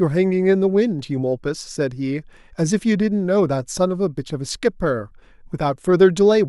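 No technical faults can be heard anywhere in this speech recording, so there is nothing to describe in time order.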